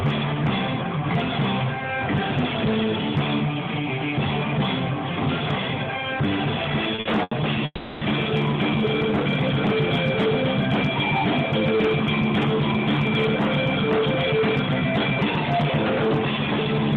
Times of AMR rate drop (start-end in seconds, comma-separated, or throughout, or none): none